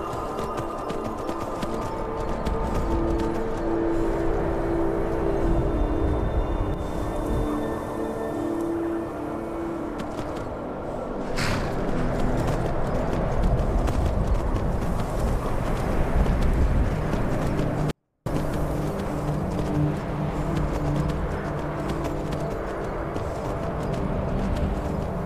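A short stretch of audio with one clear glitch: from 17.91 to 18.26 s it suddenly drops by about 48 dB and stays clean but nearly inaudible. That's a 24-bit alignment error, where 24-bit samples sitting in the low bytes of a 32-bit word get read as full 32-bit values.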